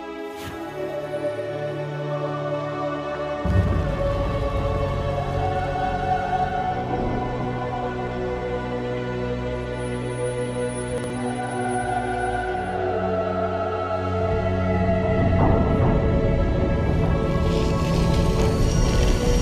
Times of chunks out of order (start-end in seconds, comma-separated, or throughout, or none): 10.98-11.10